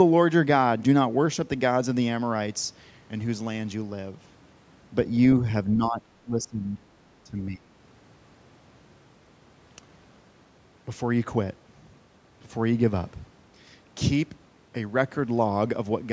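Speech suppressed in double talk, likely caused by an echo canceller that could not tell the near talker from loudspeaker echo while both sides spoke at once, and so turned everything down. From 5.74 to 6.88 s the speech sinks by roughly 20 dB for about a second in total. It happens again from 7.24 to 7.7 s, a shorter dip of about half a second with a similarly deep drop before the level recovers.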